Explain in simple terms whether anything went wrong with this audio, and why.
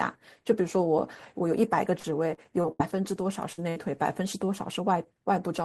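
Repeated packet loss (robotic sound), from 1.99 to 2.81 s: four separate stretches of the call never arrived in time, the longest about 77 ms. Each hole was patched by stretching the last bit of sound. Those patches add up to about a fifth of that stretch, so the speech turns choppy.

Short concealed packet loss, at 3.53 to 3.60 s: about 40 ms went missing, and the receiver covered it by briefly carrying on the previous sound before blending back in. You hear a quick smear or wobble, and a short sound there can drop out.

Burst of packet loss, at 3.70 to 3.78 s: roughly 60 ms in a row was lost. The gap was filled by extending the last sound and fading it, so you get a brief held buzz or hiss, then the speech picks up with that piece missing.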